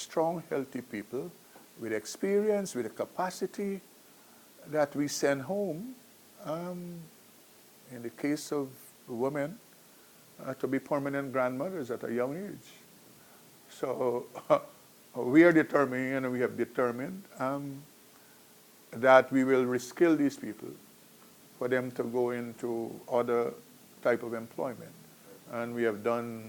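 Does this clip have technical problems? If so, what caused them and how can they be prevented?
No, there's nothing here to worry about: no technical problems come through in this clip, so there's nothing to trace back or guard against.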